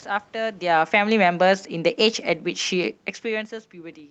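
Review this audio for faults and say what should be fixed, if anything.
Automatic gain falling from 0.62 to 1.19 s. The gain control judged the input too loud or its background noise too strong and lowered it by about 3 dB, taking the background down with it. To prevent it, set the microphone input level lower so the control has no excess level to correct.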